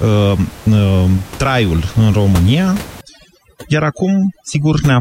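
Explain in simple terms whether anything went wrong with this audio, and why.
Yes. From about 3.01 s to the end, overdone noise removal takes over. A noise reduction tool was pushed too hard. It switches off narrow bands of sound whenever they look like noise to it. Quiet parts of the speech get caught too. So the background drops and breaks up into twinkling specks. Before that point, the steady room noise sits well under the speech, as a normal part of the recording.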